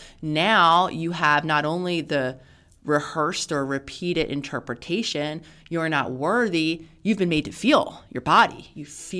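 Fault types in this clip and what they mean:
Nothing stood out on listening to this speech recording.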